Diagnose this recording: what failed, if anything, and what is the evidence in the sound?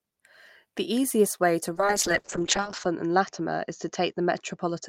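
A call bitrate drop, set off in call processing and the network path and carried out by the codec, begins at 1.74 s, just after "easiest way to", and lasts to the end of the recording. The speech turns coarse and muffled as the top end disappears, with the audio band narrowing from 20 kHz to 8 kHz. That pattern fits the encoder being pushed from around 32 kbps down to about 7 kbps, staying at its lowest rate for roughly 1.1 s.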